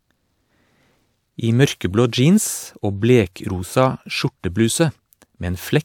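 No technical faults can be heard anywhere in this short speech recording; the signal holds steady throughout.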